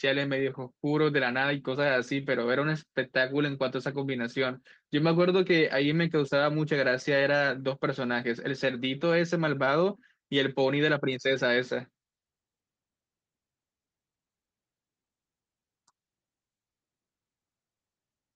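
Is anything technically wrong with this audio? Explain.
Yes. There is clock drift between sender and receiver: the sender's audio clock runs roughly 3% slow, so the receiver's jitter buffer keeps draining. Throughout the speech, this shows up as an unsteady sense of timing rather than any single obvious break.

Repeated timing corrections run from 0.42 s to 18.33 s. To keep the drained buffer fed, the receiver repeatedly stretches the audio by repeating small pieces, adding roughly 0.7 s overall and playing at 97% speed. These edits come unevenly, as slight hiccups and a faintly dragging tempo. The speech passed through the Opus call codec, which limits the audio to about 12 kHz.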